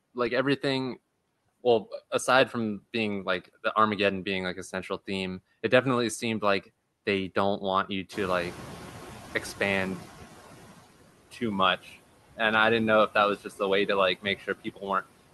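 A speech clip that passed through a noise suppressor, and the suppressor leaves audible faults. Noise suppressor artifacts run through the whole clip. The suppressor pulls down the bands it judges to be steady noise, by about 16 dB. So the background sinks in the pauses and swells back under the speech. At about 8.0 s the room noise jumps by about 17 dB. This is a real change in the room, not a system fault. Right after "they don't want you", from 8.12 to 10.58 s, the noise suppressor is catching up. Its noise estimate lags the new level, so the louder background comes through only partly reduced, with about 11 dB of cut. It then sinks over those 2.46 s as the estimate adapts. Speech cut by the noise suppressor follows "a way to like", between 14.21 and 14.84 s. The suppressor mistakes part of the speech for noise and turns it down with the background, by about 18 dB at the deepest point. 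Around 300 ms of speech sounds swallowed and faint there. The call path ends the audio at 12 kHz, which fits an Opus link.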